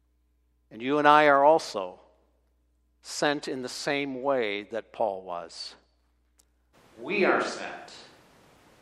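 At 6.75 s the speech suddenly goes roomy, hollow and thin, with background noise about 30 dB under it, though the level holds steady. Likely a switch to a distant microphone.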